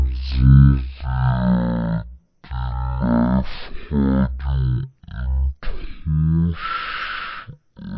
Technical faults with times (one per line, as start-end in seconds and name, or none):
0.00-7.97 wrong sample rate